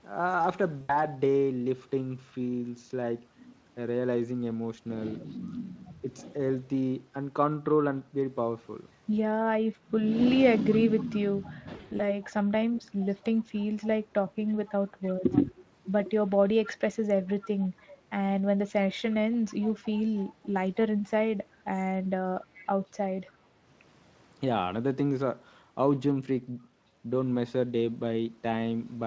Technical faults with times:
0.81-0.96 VoIP packet loss concealed by the speech codec
5.20-6.59 echo leak
6.01-6.06 speech suppressed in double talk
10.56-15.33 echo leak
11.75-12.02 VoIP packet loss concealed by the speech codec
14.37-15.60 speech suppressed in double talk
16.63-17.98 echo leak
19.12-20.77 echo leak
22.41-23.37 echo leak

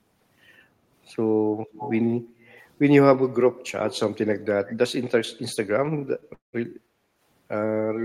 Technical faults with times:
1.72-2.01 echo leak
2.21-2.57 background gated by the echo canceller
4.68-4.76 echo leak
6.34-6.55 call audio freeze
6.75-7.22 background gated by the echo canceller

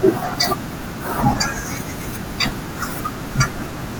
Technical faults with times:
0.00-4.00 USB whine

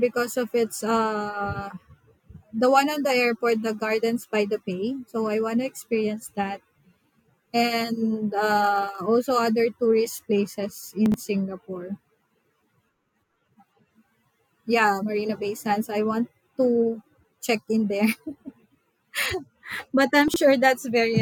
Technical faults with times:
11.06-11.14 chunks out of order
20.28-20.36 chunks out of order

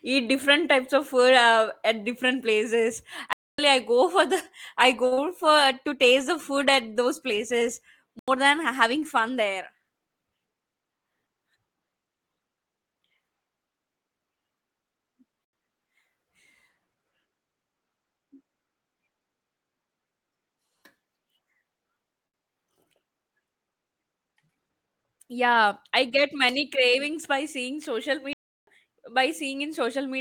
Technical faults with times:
3.33-3.58 block of digital silence
5.07-5.13 short stall from a late packet
5.13-5.19 short concealed packet loss
8.19-8.28 block of digital silence
15.45-15.53 block of digital silence
22.27-22.36 short stall from a late packet
24.30-24.86 jitter buffer speed-up
28.33-28.67 block of digital silence

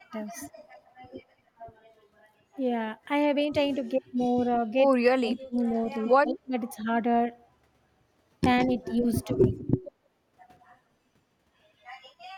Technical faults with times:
0.28-0.94 echo leak
3.72-4.54 echo leak
5.05-5.55 speech suppressed in double talk
5.32-6.37 echo leak
6.20-6.54 speech suppressed in double talk
8.58-9.64 echo leak
8.67-9.49 speech suppressed in double talk
10.60-10.74 echo leak

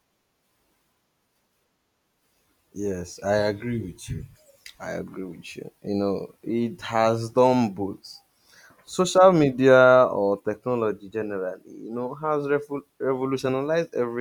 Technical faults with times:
none

